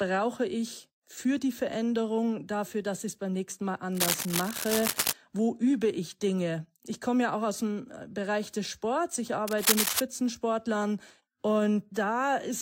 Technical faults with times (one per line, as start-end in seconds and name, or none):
3.92-5.13 cable scratch noise
9.47-10.00 cable scratch noise